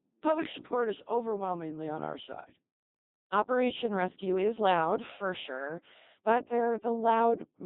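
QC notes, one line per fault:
Throughout: Codec 2 vocoder at about 2.4 kbit/s, heavy damage; speech is rebuilt from sine waves off pitch and envelope data, so it comes out robotic and buzzy.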